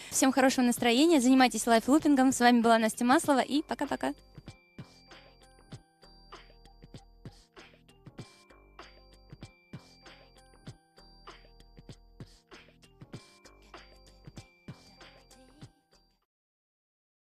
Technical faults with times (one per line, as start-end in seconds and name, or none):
none